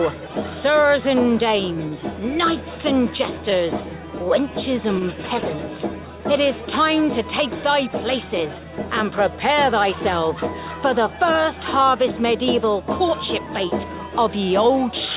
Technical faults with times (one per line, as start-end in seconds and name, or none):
1.88-1.94 short stall from a late packet
4.99-5.03 short stall from a late packet